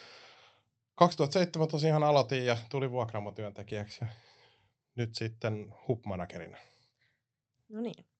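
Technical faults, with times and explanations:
No technical faults can be heard in this speech clip, so there are no times or explanations to give.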